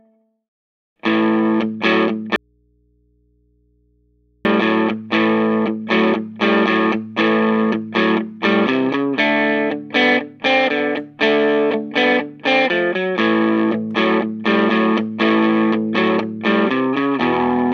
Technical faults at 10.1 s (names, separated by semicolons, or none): none